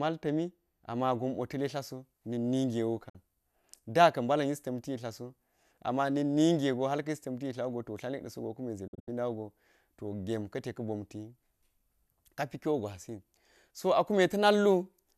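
From 0.94 s to the end, pre-emphasis is left on. The treble was lifted before recording or transmission, and the matching cut on playback never happened. The boost reaches about 8 dB at 10 kHz relative to 1 kHz, which fits a 50/15 microsecond CD-style curve. The speech sounds thin and over-bright. Sibilants hiss and stand out.

At 3.09 s comes a digital broadcast dropout. The receiver lost valid frames and muted until clean data returned. The audio fades out in about 8 ms and is gone until 3.15 s. About 48 ms is missing, which fits two lost frames. A second dropout runs from 8.87 s to 9.08 s. Here the gaps are scattered. About 144 ms is lost across roughly 0.19 s, with the longest hole about 72 ms. Each edge fades quickly, so the speech stutters through short silences.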